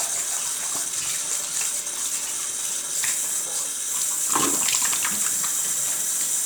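No technical faults can be heard anywhere in the recording. The sounds come across uninterrupted throughout.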